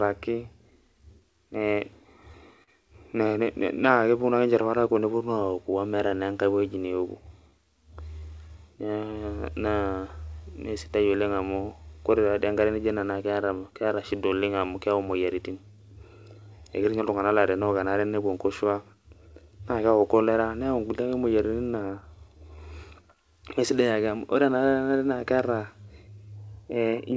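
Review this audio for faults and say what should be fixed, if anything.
Clock drift between sender and receiver, throughout: the sender's clock runs roughly 4 percent slow, so the receiver's jitter buffer keeps draining and must compensate.

Repeated timing corrections, 0.82 to 27.14 s: the receiver stretches the audio, playing at about 97 percent speed and adding roughly a second overall, in small, unevenly spaced edits.

Repeated stalls (stutter), 2.02 to 2.70 s: the buffer ran empty three times, the longest wait 39 ms, and the last sound was continued to fill about 55 ms, producing an audible stutter.

Locking both ends to a common clock, or resampling the sender's stream to the receiver's rate before buffering, would prevent the drift and the stalls it triggers.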